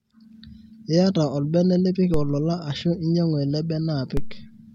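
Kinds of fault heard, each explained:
DC step: the waveform's zero line jumps abruptly by about -14 dBFS at 2.14 s and again at 4.17 s. Each jump is heard as a low thump beneath the speech, which carries on unchanged. The offset then drains away over a few tenths of a second, as a 2 Hz high-pass would let it. On the waveform the trace shifts off centre and curves back. A spectrogram shows a brief vertical smear at each jump, heaviest in the lowest bins.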